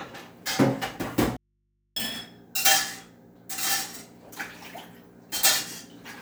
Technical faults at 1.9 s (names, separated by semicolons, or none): audio dropout to a faint residue